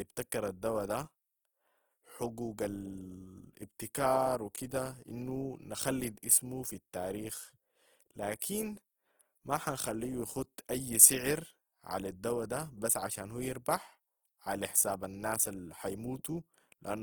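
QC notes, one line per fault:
Throughout: Opus compression, likely at a low bitrate near 16 kbps, makes the speech grainy and rough as noise-filled bands replace detail; the spectrogram shows a hole-free, speckled texture reaching about 20.2 kHz.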